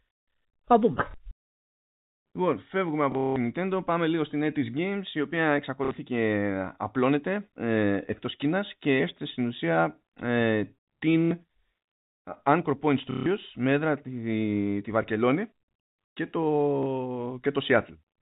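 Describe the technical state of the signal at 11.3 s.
Packet loss with last packet repeated occurs from 11.26 to 11.31 s. The last packet is replayed over a 60 ms gap, fitting two lost packets. The repeats give a brief robotic stutter.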